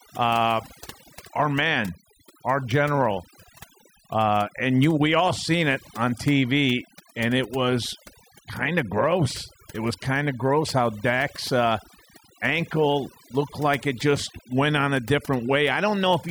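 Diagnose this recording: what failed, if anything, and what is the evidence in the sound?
Overdone noise removal in call processing: throughout, the background drops and breaks up into twinkling specks. Unlike codec warble, the speckle clusters where noise was gated.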